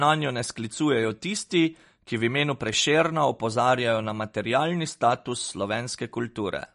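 Throughout, the speech has likely been squeezed through MP3 compression at a low bitrate, around 40 kbps. It leaves nothing above 10.6 kHz and a plainly watery, swirling texture. From 2.69 to 2.76 s, a sudden voltage pulse likely hits the signal, producing a loud pop, two sharp clicks standing a few decibels above the speech as it continues.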